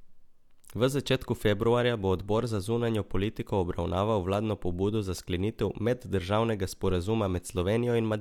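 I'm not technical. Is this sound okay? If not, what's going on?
Yes, this sound is okay, and nothing is going wrong in it.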